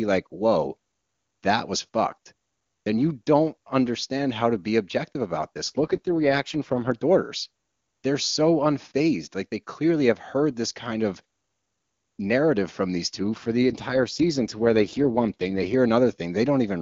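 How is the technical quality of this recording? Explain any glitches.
Two brief stretches of degraded sound interrupt clean speech carried by the AMR wideband (HD Voice) codec, which at its high rate leaves little or no audible damage.

AMR rate drop: at 5.69–6.92 s, just after "to be objective about", and at 13.19–15.74 s, after "narrative from these", the codec switches to a much lower rate and spends bits on error protection, consistent with a fall to around 8.85 kbit/s. The speech turns rough and synthetic without any gap. A spectrogram keeps its full band but shows smeared, grainy harmonics, and the waveform stays continuous.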